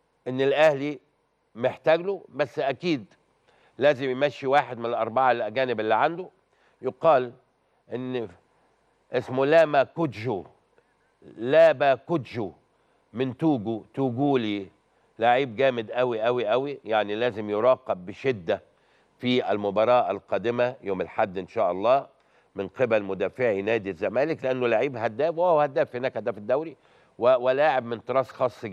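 Nothing here stands out as a technical fault; there's no dropout, glitch or distortion anywhere to point to.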